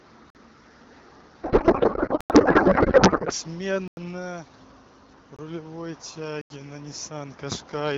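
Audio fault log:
0.30 to 6.50 s, block of digital silence: output blocks went out as zeros at 0.30 to 0.35 s (46 ms), 2.21 to 2.30 s (93 ms), 3.88 to 3.97 s (93 ms), 5.36 to 5.39 s (23 ms) and 6.41 to 6.50 s (87 ms). The first four lengths fit buffers of 1024, 2048 and 4096 samples. Each hard cut out and back in leaves a brief hole.
1.43 to 3.33 s, codec payload misread: octet-aligned AMR frames are read as bandwidth-efficient, so the decoder takes the codec parameters from the wrong bit positions. The speech turns into garbled noise and warble that barely follows it, with the 2.21 s dropout inside this stretch.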